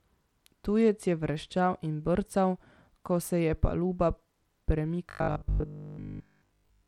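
Speech clip with a gritty, thinned-out top end and flickering treble the whole way through, most likely Bluetooth SBC compression at a low bitrate, something like 96 kbps. From 5.1 s to the end, it turns into a rigid metallic 50 Hz buzz, robotic sound from repeated short buffers, probably 20 ms chunks replayed while most of the real audio gets skipped.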